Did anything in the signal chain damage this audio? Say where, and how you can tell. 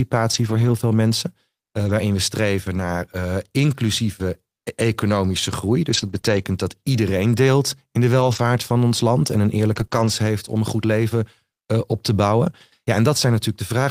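Yes, the network stage. The sound turns briefly rough and grainy at 0.33–0.71, 1.77–1.91, 2.75–2.81, 5.89–6.19, 6.25–6.43, 8.19–8.37, 9.71–9.85 and 9.91–10.09 s. These are lost packets rebuilt from error correction: the decoder played the low-bitrate backup copies carried in the following packets, so nothing drops out, but detail suffers.

Two quick smears occur at 6.21–6.25 s and 9.87–9.91 s, each sitting between rebuilt stretches. This is short concealed packet loss: about 20 ms arrived too late, and the decoder extrapolated from the preceding sound before blending back into the real audio.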